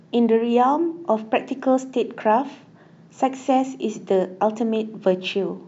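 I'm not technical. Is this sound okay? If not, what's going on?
Yes, this sound is okay, and nothing is going wrong in it.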